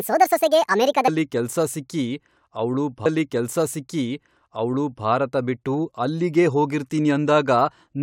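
Speech clip with two faults. From 0 to 1.08 s, a section at the wrong speed runs 1.61 times too fast, so the voice is hurried and raised by roughly seven semitones until normal pace returns at "ಕೆಲ್ಸ ಸಿಕ್ಕಿ ಅವ್ಳು ಭಾರತ". The likely cause is that stretch being clocked at the wrong rate during editing or playback. Then, after "ಕೆಲ್ಸ ಸಿಕ್ಕಿ ಅವ್ಳು", a stream segment is repeated from 3.05 to 5.04 s. The player jumps back and replays about 2.0 s of audio it had already played, which points to a segment being fetched or queued twice, before continuing with "ಭಾರತ ಬಿಟ್ಟು ಅಲ್ಲಿಗೇ".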